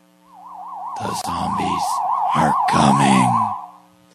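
At 1.21 s the sound just drops out for about 27 ms, resuming at 1.24 s right where it left off. That's a gap at a join of encoded pieces: two separately encoded chunks were butted together without trimming, so the encoder's start-up delay and last-frame padding both survive as silence. You can hear the edges on either side smeared by the codec, like a tiny hiccup in otherwise continuous sound.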